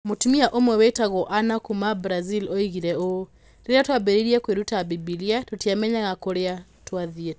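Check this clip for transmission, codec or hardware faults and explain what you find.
One fault runs through the whole clip: the resampler restarted on every block. Each 100 ms block was converted alone, fitting a 48 kHz to 16 kHz conversion. Its edges lacked neighbouring samples, leaving regular ticks at 10 Hz under the speech.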